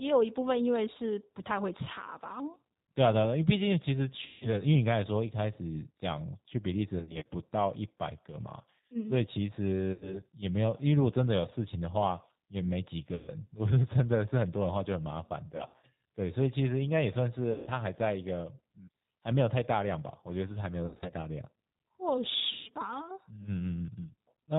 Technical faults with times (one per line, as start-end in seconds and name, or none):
0.00-24.58 G.729 codec
4.26-4.62 VoIP packet loss concealed by the speech codec
6.99-7.26 VoIP packet loss concealed by the speech codec
9.93-10.21 VoIP packet loss concealed by the speech codec
13.15-13.30 VoIP packet loss concealed by the speech codec
15.57-15.86 VoIP packet loss concealed by the speech codec
17.52-17.69 VoIP packet loss concealed by the speech codec
20.86-21.14 VoIP packet loss concealed by the speech codec
22.53-22.70 VoIP packet loss concealed by the speech codec